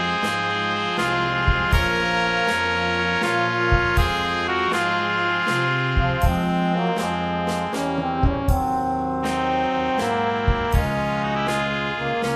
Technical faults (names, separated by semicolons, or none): mains hum